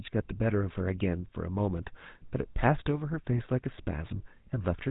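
GSM full-rate codec damage runs from start to finish of this speech clip. The excitation is rebuilt from sparse, evenly spaced pulses, which fits a 13 kbps full-rate encoder, so the voice turns plainly buzzy and gravelly, and nothing above 4 kHz survives.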